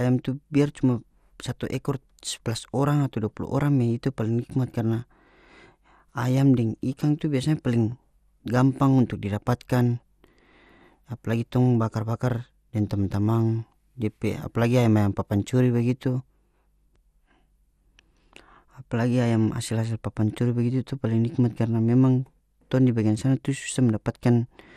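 From start to finish the speech sounds dull and gurgly, with a granular edge and upper bands flickering in and out, likely MP2 compression at a bitrate around 80 kbps. Too few bits force Layer II to drop whole sub-bands rather than smear transients like MP3.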